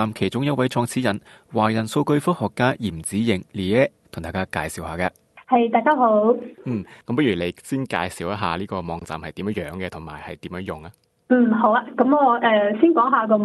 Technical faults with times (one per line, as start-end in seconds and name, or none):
none